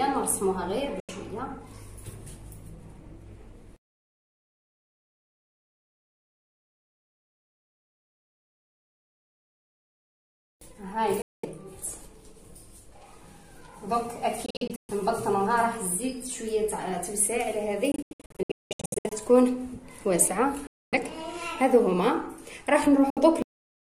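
Silent gaps at 1.0, 11.2, 14.5, 17.9 (scattered over 1.2 s), 20.7 and 23.1 s, each 64 to 810 ms, are likely a Bluetooth dropout. The sound resumes further along, not where it stopped. At 23.42 s a cut-off end halts the sound mid-event into dead digital silence, with no fade or decay.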